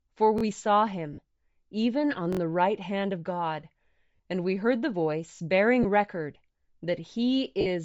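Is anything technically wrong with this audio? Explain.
Yes. The speech carries three kinds of fault.

Throughout, the upper spectrum sounds thinned and refilled with noise, giving a breathy, grainy edge. This is likely Bluetooth LC3 compression at a low bitrate (about 32 kbps, 10 ms frames). It is a constant texture, unlike the isolated events below.

A repeated buffer occurs at 0.38–0.43 s, 2.33–2.39 s and 5.36–5.40 s. Late data made the device replay the same 21.33 ms chunk two or three extra times, which fits a 1024-sample buffer. The result is a stutter with hard joins, and no audio is skipped.

Lost LE Audio frames occur at 1.13–1.18 s, 4.16–4.20 s, 5.83–5.86 s and 7.61–7.67 s, lasting 50, 40, 20 and 50 ms. The decoder reused the last spectrum with randomised signs, so each gap becomes a noisy smear rather than a crisp, exactly repeated fragment.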